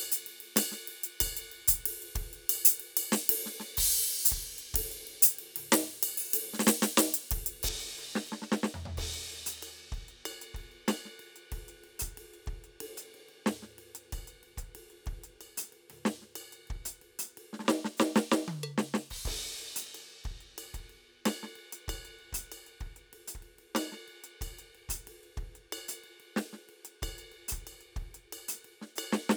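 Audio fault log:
0.0–7.69 s, pre-emphasis left on: an uncorrected 75 µs treble lift, about 14 dB at 10 kHz, leaves the music thin and sibilant. It climbs steadily with frequency, unlike a flat shelf EQ.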